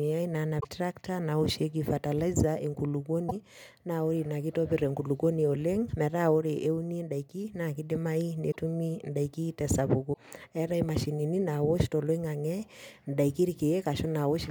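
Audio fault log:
0.59–0.65 s, 3.28–3.32 s, 8.50–8.56 s, 10.12–10.18 s: broken MP3 bit reservoir. Brief garbled disturbances, each spanning about two 26.1 ms frames, likely from frames reading stale borrowed bytes after a cut. The frame-sized length sets them apart from random clicks.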